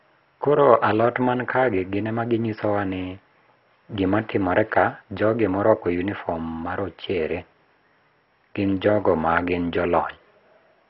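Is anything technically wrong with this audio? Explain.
Yes. The speech carries audible codec damage from start to finish.

Throughout the clip, the sound is heavily band-limited, with nothing above about 5.6 kHz, and it has a gurgling, granular texture, most likely from MP2 compression at a very low rate, around 32 kbps. MPEG Layer II divides the spectrum into 32 sub-bands. Starved of bits, it drops the upper bands entirely and quantises the rest coarsely. The result is dull, watery speech. On a spectrogram, energy stops sharply at 5.6 kHz, with blocky, flickering patches below it.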